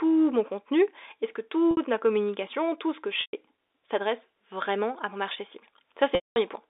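Packet loss with pitch repetition at 1.71 s (60 ms), 3.21 s (120 ms, after "communication tout ce que") and 6.15 s (210 ms, after "à mon marché cible"): the receiver loops the last pitch period, so the short gap sounds held and buzzy, while the longer ones fade toward silence.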